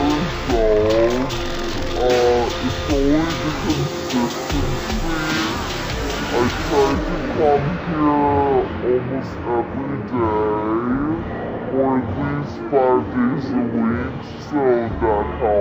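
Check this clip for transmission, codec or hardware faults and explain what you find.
One fault is present, and it runs for the whole clip: stereo read as mono. Left and right samples, which alternate in the stream, are being read one after another as a single channel. The sound therefore plays at 0.5x speed and 12 semitones low, a full octave down, with a fainter mirrored image of the content appearing in the upper half of the spectrum.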